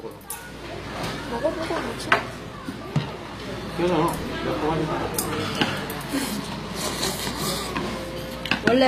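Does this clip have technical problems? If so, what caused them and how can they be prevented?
Yes. HE-AAC compression damage is plainly audible throughout. The treble sounds bright but synthetic, and nothing remains above 14.9 kHz. This is likely HE-AAC spectral band replication, which rebuilds upper bands from copied lower ones, pointing to a low bitrate near 24 kbps. To prevent it, encode at a higher bitrate with plain AAC or a lossless format.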